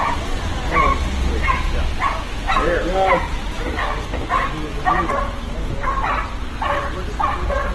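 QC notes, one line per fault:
throughout, Opus compression: plainly audible grit and roughness instead of swirling, as band energy is kept but fine detail is filled with folded or noise content, and nothing above 12.1 kHz. The lack of MP3-style spectral holes points to a likely Opus CELT encode near 16 kbps.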